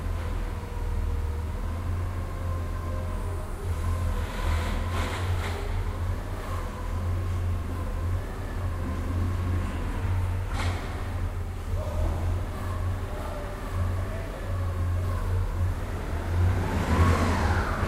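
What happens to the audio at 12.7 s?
Nothing goes wrong at 12.7 s; the audio is intact there and plays on without any dropout, glitch or other fault.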